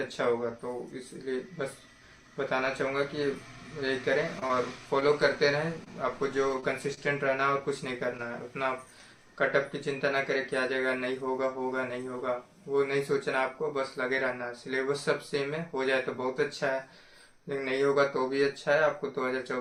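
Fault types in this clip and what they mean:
Repeated packet loss (robotic sound): From 4.39 to 5.10 s, audio goes missing several times in quick succession. Five short holes appear, none longer than 20 ms. The receiver patches each one by extending what it last played, about 70 ms of patching in all, while about 40 ms of real sound is gone. Roughly a tenth of that stretch is filler, which gives it a choppy texture.
Short stall from a late packet: Here a piece of audio arrives late rather than lost. The playout buffer runs dry, so the last sound is held until the piece turns up, and playback then continues from the same point. Nothing is skipped. It happens at 5.84 s, a hold of about 19 ms, and from 6.94 to 6.99 s, a hold of about 28 ms. Each one is heard as a brief drawn-out moment.
Short concealed packet loss: A small slice of audio never reaches the decoder in time, and the gap is covered by continuing the preceding sound before blending back into the real signal. 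From 6.60 to 6.64 s, 20 ms is lost and bridged with 20 ms of filler. From 8.17 to 8.20 s, 20 ms is lost but only about 11 ms is filled. Each leaves a brief smear or wobble.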